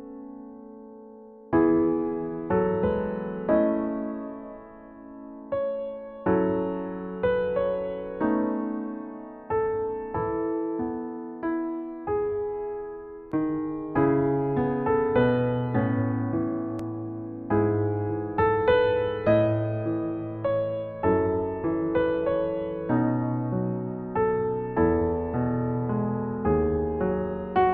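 Two brief skips interrupt the audio, at 13.32 s and 16.79 s, each marked by a small jump where the sound lurches forward instead of pausing. The first skip discards roughly 10 ms and the second only a few milliseconds, with no gap of silence at either point. This is most likely a dropped buffer (overrun): the samples were not read out before the hardware wrote over them, so the surviving audio on either side is spliced directly together.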